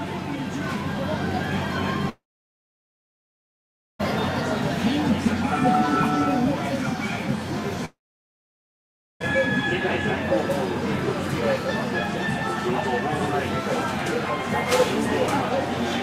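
At 2.09 s the sound trails off into a brief fading buzz, then goes quiet until 4.01 s, and the same thing happens again from 7.85 to 9.22 s. That's likely a long network dropout: roughly 1.9 s and 1.4 s of audio never arrived, and playback picks up after each gap with that material simply gone.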